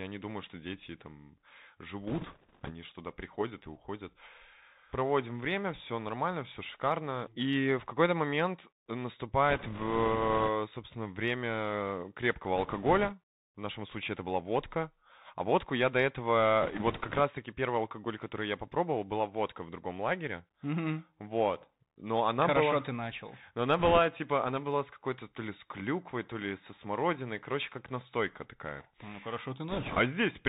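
Throughout, the speech sounds boxed-in and dull, with a fine granular hiss underneath and scratchy, smeared s sounds. That is the Bluetooth CVSD headset codec. It passes nothing above 4 kHz, and because it codes each sample as a single up-or-down bit, which fits a 64 kbps link, loud high sounds outrun its adapting step size and distort.

Layered on that are six short bursts of rushing, crackly noise, with no sharp clicks, from bit errors on a Bluetooth voice link. They occur at 2.07–2.71 s, at 9.50–10.49 s just before "собственно время крепкого", at 12.56–13.14 s just after those same words, at 16.62–17.21 s, at 23.78–23.98 s just before "типа она была с", and at 29.69–29.99 s. In each burst, flipped bits each nudge the waveform only slightly and their effect fades quickly. The damage is therefore a wash of crackle rather than pops. It is heaviest in the final burst, where the error rate is around 4 percent, and lightest near 12.6 s, at roughly 1.5 percent.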